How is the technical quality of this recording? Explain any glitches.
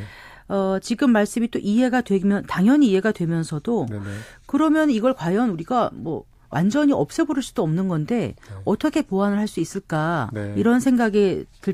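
No glitches turn up anywhere in this speech recording. There is nothing in its technical quality that calls for an explanation.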